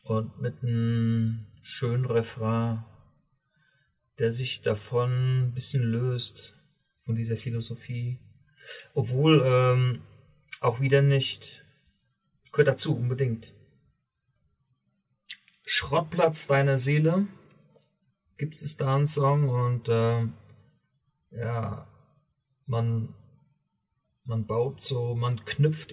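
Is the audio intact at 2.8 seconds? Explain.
Yes, the audio is intact at 2.8 seconds, with no dropout, click, distortion or other fault audible at that point.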